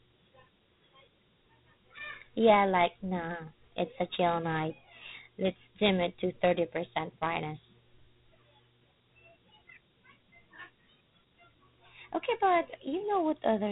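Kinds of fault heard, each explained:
Dialogic VOX ADPCM: This is the 4-bit adaptive coding used for phone menus and voicemail files. Each sample is stored as a small step from a running prediction, so fine detail is lost. Here the damage is plainly audible as a gritty hiss riding on the speech. Nothing sounds above about 3.9 kHz, leaving the speech narrow and dull. The 32 kbps rate fits 8 kHz sampling at four bits per sample.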